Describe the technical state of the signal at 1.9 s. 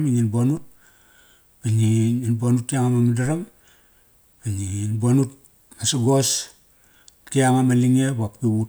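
Around 1.9 s the speech signal is intact, with no audible technical fault at that moment.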